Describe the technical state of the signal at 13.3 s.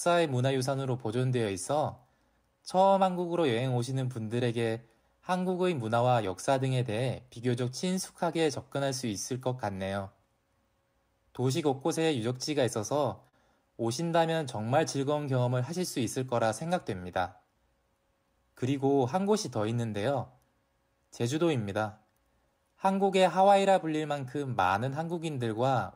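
At 13.28 to 13.35 s there is a short stall from a late packet. A packet was not there when it was due, so the jitter buffer ran empty. The receiver held the last sound for 44 ms until the packet came in, then carried on from the same point. Nothing is missing. A sound is simply held too long, with a faint buzz or dip, and the stream runs 44 ms later from there.

This stall sits inside a longer problem: clock drift between sender and receiver. The sender's clock runs slow, by roughly 3 percent. Audio arrives a little slower than the receiver plays it out. That keeps draining the buffer.

The same drift drives repeated timing corrections from 0.08 to 25.69 s. The receiver keeps padding the stream with short repeated pieces to stay in step. The effective speed is 97 percent. The edits all push the same way, unevenly spaced. Together they add about a second. Each one is small, heard at most as a slight hiccup or an unsteady tempo around 13.3 s and elsewhere.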